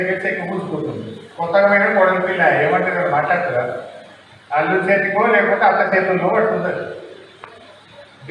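No technical faults can be heard anywhere in the audio.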